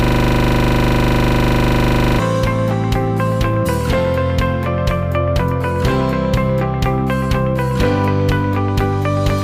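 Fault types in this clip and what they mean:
System hang loop: a frozen system looped one 40 ms buffer from the start to 2.2 s, a steady 25 Hz buzz of exact repeats, not dropouts.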